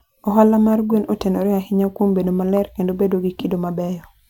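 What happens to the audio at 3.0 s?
Nothing goes wrong at 3.0 s; the speech carries on intact through that moment with no dropout, click or distortion.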